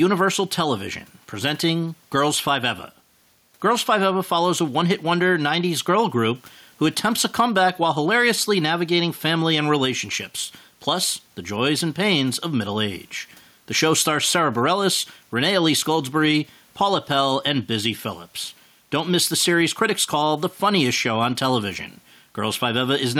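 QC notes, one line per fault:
Throughout, gain pumping: the level pumps with a gain swing of around 5 dB, with loud and quiet syllables squeezed toward one level so the speech sounds flattened. The room noise itself sits about 41 dB below the speech. The likely cause is microphone gain set far too high, with a fast limiter or compressor clamping down on every loud moment and releasing in the gaps.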